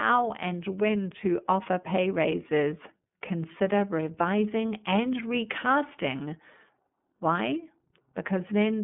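This speech clip is carried through the iLBC codec for its whole length. Nothing passes above 3.7 kHz, and the band sits near 150 Hz to 3.5 kHz. Each 30 ms frame is coded separately, which fits the 13.33 kbps mode. The speech sounds clearly rough and synthetic.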